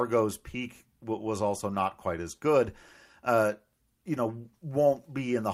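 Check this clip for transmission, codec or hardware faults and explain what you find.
No transmission, codec or hardware faults can be heard in this speech clip. There is nothing to report.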